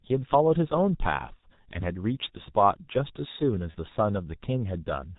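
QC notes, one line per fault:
throughout G.723.1 codec: The speech is band-limited with nothing above 4 kHz, so it sounds muffled, and the heavy coding damage makes it hoarse, with smeared consonants. This is consistent with a low-rate telephony coder at roughly 6.3 kbit/s. It works on 30 ms frames and updates its vocal-tract model slowly, so fast articulation blurs. A spectrogram shows a hard ceiling at 4 kHz, fricatives cut off at that line, and formant bands that look coarse and stepped rather than smoothly gliding.
3.71–3.75 s VoIP packet loss concealed by the speech codec: About 30 ms of audio went missing, which fits a single lost frame. The decoder filled the gap by repeating its last pitch and filter settings with falling gain, so the sound there turns briefly into a buzzy tone or coloured noise that fades rather than dropping to silence. Because each frame depends on the one before, the speech stays weak or distorted just afterwards. 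The waveform shows a short stretch that shrinks in level. The spectrogram shows frozen content that dims toward the end.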